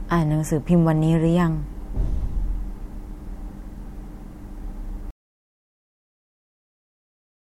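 At 5.1 s the speech cuts off abruptly and the recording falls to silence, which continues for about 2.45 s to the end of the clip. This is an audio dropout to silence. The input was likely lost through a disconnected device, a broken link or an accidental mute while the recorder kept writing silence. No room tone or noise floor survives in the gap, and whatever followed is missing.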